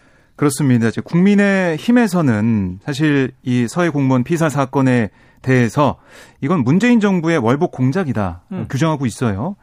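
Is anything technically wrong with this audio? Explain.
No, nothing technically wrong can be heard in this speech recording. There is no fault to point to anywhere in it.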